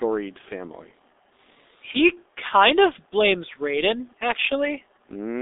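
Throughout, the speech passes through the G.723.1 codec, likely at its 6.3 kbit/s rate, confined to a 300 Hz to 3.7 kHz telephone band with nothing above 3.8 kHz. Heavy coding damage leaves the voice muffled and hoarse, with consonants smeared.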